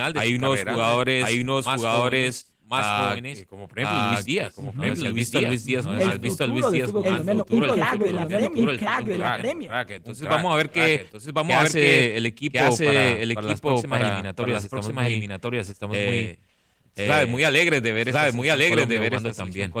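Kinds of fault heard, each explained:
Doubled audio track: a full-band copy of the speech runs about a second behind the original at roughly equal loudness, likely from a second, slower capture path. On a spectrogram each syllable's pattern reappears about a second later, and the waveform shows undecayed, overlapping twin envelopes.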